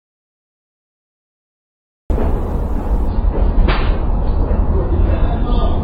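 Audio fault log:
0.0–2.1 s, audio dropout to silence: The input was likely lost, through a disconnected device, a failed link or a mute, while recording carried on writing silence. The clip opens already in this gap: dead silence with no room tone until sound arrives abruptly at 2.1 s.
3.08–5.83 s, adaptive stream at a lower bitrate: The stream switched to a much leaner version of itself, a drop that fits a fall from around 96 to 16 kbit/s AAC. With nothing left above 5 kHz, the top end turns dull and smeary. Coding artefacts rise suddenly, with no gap, until the clip ends.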